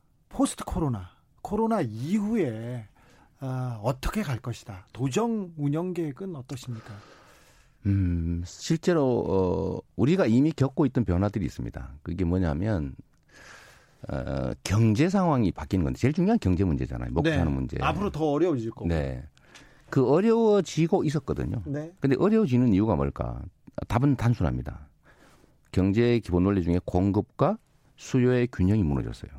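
Nothing goes wrong anywhere in this speech recording, so there's no technical fault to point out at any moment.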